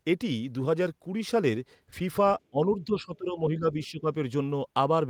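The echo canceller likely mistook both sides talking for echo, causing speech suppressed in double talk from 2.50 to 4.07 s, with the speech dipping about 15 dB.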